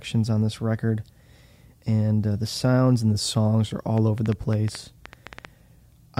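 Something in the recording chain, likely nearby equipment interference or a faulty connection, injects pulses into this speech from 3.98 s to 6.19 s, right after "and the songs are". The result is a train of clicks: about fifteen similar pops, unevenly spaced at roughly six per second and standing some 5 dB above the speech.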